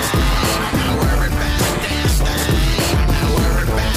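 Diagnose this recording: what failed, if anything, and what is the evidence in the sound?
At about 0.84 to 0.88 s there is a brief jumbled blip, as though a sliver of sound skipped ahead and then doubled back. This is a case of chunks out of order at the driver or buffer stage. One block of roughly 23 ms was delivered one block late and played after its successor. Nothing is missing, but the swapped order leaves three hard joins.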